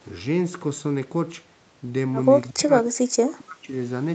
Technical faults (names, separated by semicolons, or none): speech suppressed in double talk